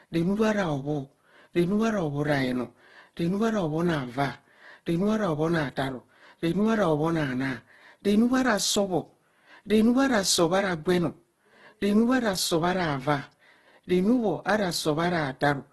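A speech recording with Opus compression damage running the full length of the clip. The sound is heavily grainy and rough, with voiced passages turning noisy where band energy is kept but its fine detail is replaced by folded or noise-filled content. Nothing survives above about 12.1 kHz, a super-wideband limit. The character likely comes from the codec's CELT music mode, and the depth of damage fits a very low rate of around 12 kbps.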